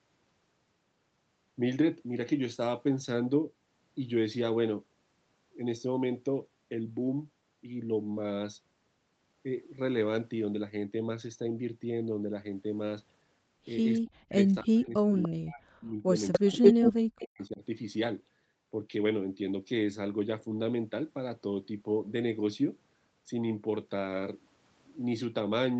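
Speech suppressed in double talk runs from 14.01 to 16.18 s. The speech dips by as much as about 40 dB, likely because the echo canceller turned down its own talker along with the loudspeaker echo.

An echo leak at 15.22 s returns a brief copy of the speech about 293 ms late, well below the speech level. This is likely residual loudspeaker echo that the canceller missed.

A second echo leak at 16.32 s brings a 203 ms delayed copy at roughly the same level as the speech, likely from the same uncancelled path.

Double-talk suppression returns from 16.39 to 17.63 s and again cuts the speech by up to about 40 dB, likely the canceller reacting to overlapping talk.

Within that span, from 16.63 to 16.91 s, an echo leak plays a 203 ms delayed copy slightly louder than the speech, likely loudspeaker pickup passing straight back.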